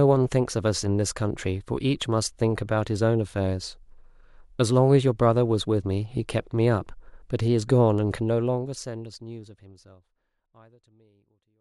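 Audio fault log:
No fault is logged for this speech clip.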